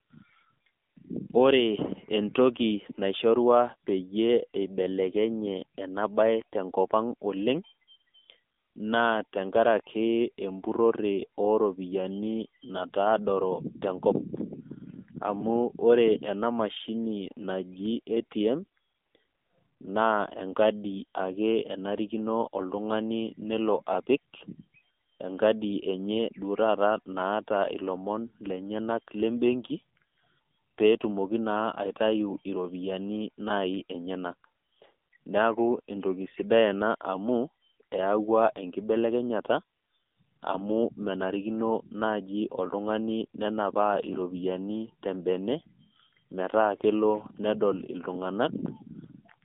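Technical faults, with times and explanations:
Throughout, AMR narrowband mobile codec: speech is confined to roughly 200 Hz–3.6 kHz, and its plainly buzzy, synthetic texture fits a low mobile bitrate near 7.4 kbps.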